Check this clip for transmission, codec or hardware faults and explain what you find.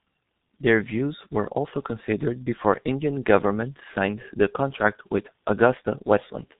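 The speech carries one fault for its whole length: heavy G.723.1 codec damage. Each 30 ms frame is coded at a rate that fits about 6.3 kbit/s, cutting everything above 4 kHz and tracking the voice sluggishly. This leaves muffled, hoarse speech with smeared consonants. On a spectrogram there is an empty band above 4 kHz and blurred formant transitions.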